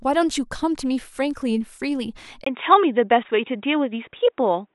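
At 2.44 s the speech drops out for about 20 ms. When it returns, the sound is dull and boxy, with nothing above 3.8 kHz. This is an input switched to a poorer device. The system most likely changed to a different microphone or a headset's call profile. That path passes a narrower band. A faint new background noise appears, about 50 dB below the speech. The loudness stays much the same. The narrowed sound lasts to the end of the clip.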